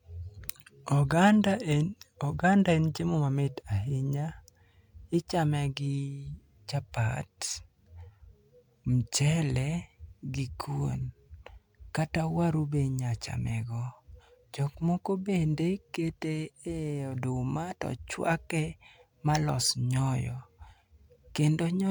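Speech with no audible faults.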